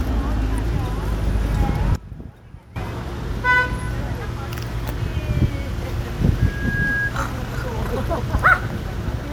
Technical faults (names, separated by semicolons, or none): one channel inverted; loudspeaker feedback squeal